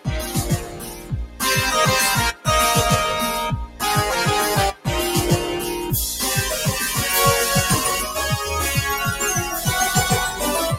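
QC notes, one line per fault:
Throughout: noise suppressor applied to music or sounds. A speech-oriented suppressor stays active across the whole clip, treating sustained content and tails as noise, so the level swings by roughly 10 dB as the gain rides up on attacks and sinks between them, giving a pumping, fluttering, thinned quality. On a waveform the envelope breathes unevenly; on a spectrogram sustained bands fade and reappear in patches while transient columns stay bright.
0.00–1.41 s and 3.66–3.82 s: sound cut by the noise suppressor. In these spans the suppressor judged the sound to be noise and pulled it down harder than elsewhere, with the deepest drop about 12 dB, around a second in the first span and a brief dip of roughly 150 ms in the second. The material sinks and its decay is shortened. A waveform shows the envelope collapsing there; a spectrogram shows those regions darkened and tails chopped off.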